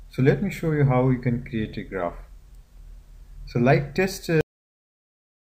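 At 4.41 s the audio shows a cut-off end. The final buffers were never written, so sound stops mid-event and drops straight into digital silence.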